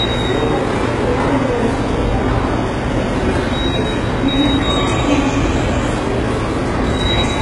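HE-AAC compression affects the whole clip, at a heavy level that fits a bitrate near 12 kbps. The treble is likely rebuilt from copied lower bands rather than coded, so it sounds gritty and metallic, with nothing above 11.3 kHz.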